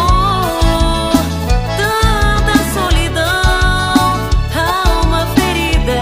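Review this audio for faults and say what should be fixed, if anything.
Nothing needs fixing here.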